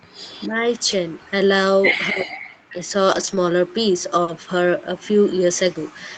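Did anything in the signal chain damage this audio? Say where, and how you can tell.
Yes. In the call-processing stage, the speech dips at 0.05–0.59 s (about 30 dB, roughly 0.2 s in total) and 2.1–2.87 s (about 40 dB, most of that span). The likely cause is speech suppressed in double talk, shown as notched waveform envelopes.

Also in call processing, a faint delayed copy trails the speech from 0.18 to 1.31 s, 245 ms late and around 30 dB down. This is likely an echo leak, visible as ghosted spectrogram harmonics.

In the network and codec stage, the audio roughens briefly at 0.91 s and 4.27 s, and over 3.11–3.37 s (about 180 ms altogether). These are lost packets rebuilt from error correction, with grainier, noisier spectrogram texture and no gap.

On the network, 4.23–4.29 s carries a 40 ms smear. This is short concealed packet loss: the decoder extended the preceding sound, leaving a smoothed, repetitive patch in the waveform.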